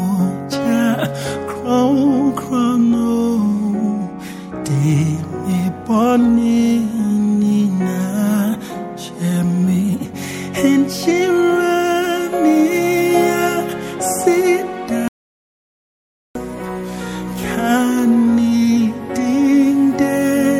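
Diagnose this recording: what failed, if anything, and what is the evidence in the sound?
Audio dropout to silence, 15.08 to 16.35 s: sound cuts to silence, no room tone, likely a lost capture-stage input while recording continued.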